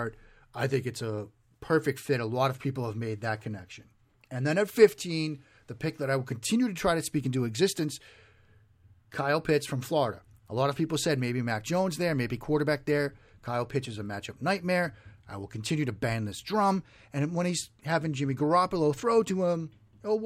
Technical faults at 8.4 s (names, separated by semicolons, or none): none